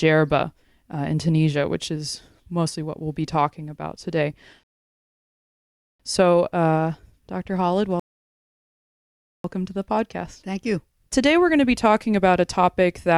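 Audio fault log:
4.63–6.00 s and 8.00–9.44 s, rebuffering stall: silence of 1.36 s after "be talking about today", then 1.45 s before "to the podcast". Playback ran out of downloaded audio and waited, so the speech resumes exactly where it stopped, losing nothing but adding time.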